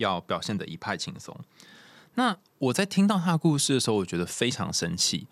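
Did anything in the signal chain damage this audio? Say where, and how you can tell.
No, nothing in this speech recording stood out on listening as damage introduced anywhere along the signal chain.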